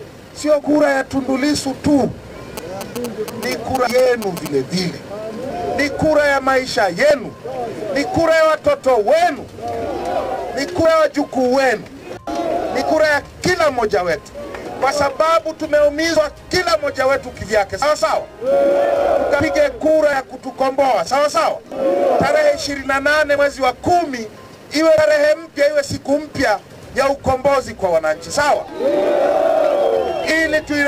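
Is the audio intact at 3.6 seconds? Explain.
No. GSM signalling bursts run from 2.57 to 4.48 s, covering 3.6 s. A nearby 2G phone in signalling mode transmits short clusters of radio bursts, and the audio circuitry rectifies that RF into the signal. The result is a galloping dit-dit-dit of brief buzzes at about 217 Hz, the burst repetition rate. It sits roughly 10 dB below the wanted sound.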